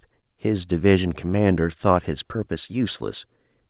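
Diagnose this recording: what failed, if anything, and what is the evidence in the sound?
Nothing in the recording points to a failure at any stage of the chain. The speech has come through a call path whose band ends at 4 kHz, which fits narrowband G.711 mu-law telephone coding working as intended.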